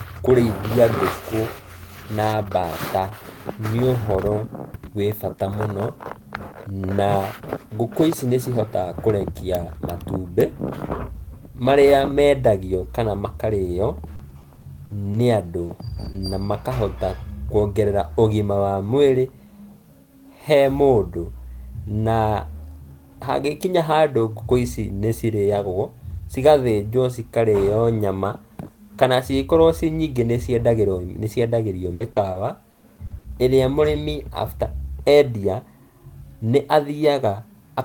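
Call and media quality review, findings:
Repeated packet loss (robotic sound), 14.15–16.46 s, between "marĩa mendagio kana makarĩo" and "makahota kuongerera ũgima wa": speech turns choppy. Short holes, the longest 50 ms, are patched by the jitter buffer's concealment extending the last sound. It is a chain of gaps, not one dropout.

Repeated packet loss, 31.94–33.26 s: the same choppy pattern, denser. About 23% of the span is concealed and the longest hole is 60 ms. Network loss or late arrival is the cause, not codec warble, because pieces of the speech are missing outright.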